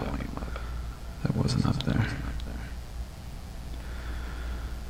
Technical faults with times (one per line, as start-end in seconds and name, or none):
0.00-4.90 mains buzz